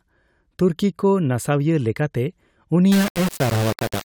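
From 2.92 s to the end of the clip, the speech turns harsh and grainy, with a rough buzz that rises and falls with the talker rather than sitting underneath as steady hiss. Quieter stretches break up and sputter, and the error sits only around 10 dB below the speech. This is low bit depth without dither: the signal was likely rounded to just 3 bits, leaving so few steps that the error follows the waveform instead of spreading out as noise.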